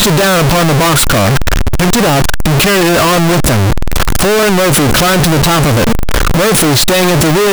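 A speech clip with one fault running the whole way through: it sounds like float read as integer. The waveform sits as a near-square block at an almost fixed, high level, so everything is blaring and harsh, with background noise as loud as the talker. The pitch still comes through. The likely cause is 32-bit float samples being interpreted as 32-bit integers, so the sign and exponent bits end up setting the level.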